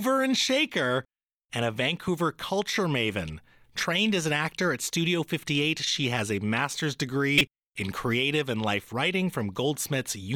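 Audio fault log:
7.38–7.41 s, corrupt frame decoded: a short, loud glitch peaks around -5 dBFS between "she has a master's" and "in creative and life". Flipped bits in roughly one compressed frame made the decoder misread gains and codes, spraying energy into wrong frequencies for that frame.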